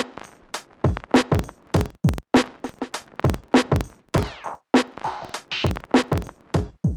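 From 1.16 s to 6.46 s a steady rough buzz of ticks at about 21.5 Hz sits under the sound, rising and falling with its level. This is a filter restarted on every block: its state resets each time, fitting a 2048-sample block, so every block opens with a small transient.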